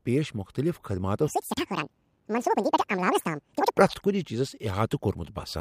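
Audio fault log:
1.28 to 3.78 s: audio read two samples at a time (double speed), just after "پیش مختلف خدماتو". The speech suddenly runs twice as fast and jumps an octave higher. Each sample pair is taken as one frame.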